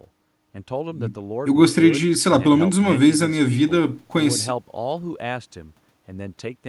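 Nothing in the speech signal points to a technical fault at any moment of the recording.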